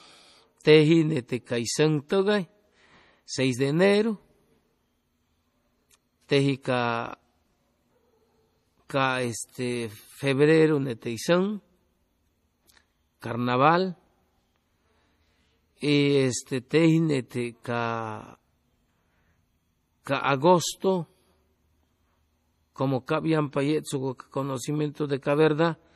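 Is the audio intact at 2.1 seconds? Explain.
No. At 2.09 s, just after "nete cay sʉŋ", a pre-echo puts a brief hiss about 14 ms before a sharp attack. The codec spread the block's quantisation noise into the quiet moment ahead of the onset, so unlike a click it comes before the transient and softens it. Throughout, MP3 compression is also plainly audible, with a watery, swirly texture and nothing above 15.1 kHz, which fits a low bitrate around 40 kbps as the likely cause.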